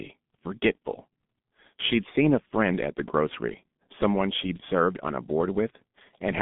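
From start to finish the speech sounds muffled and hoarse, with consonants smeared together and nothing audible above about 3.8 kHz; the remaining band sits roughly between 150 Hz and 3.6 kHz. This is heavy G.723.1 codec damage. The codec models the voice in 30 ms frames at a very low rate, consistent with a setting near 6.3 kbit/s. It updates that model too slowly for quick articulation, so transients blur and the voice takes on a rough, buzzy texture.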